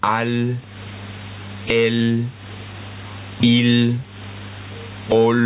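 Gain pumping runs through the whole clip. The level drops sharply the moment a loud sound arrives. The swing is large, on the order of 25 dB, and the result is squashed, with loud and soft parts pressed close together. The likely cause is input gain set far too high, with a fast limiter pulling it down on each peak. All of this is heard through a band that stops at 4 kHz, which fits a 64 kbps telephone codec such as G.711.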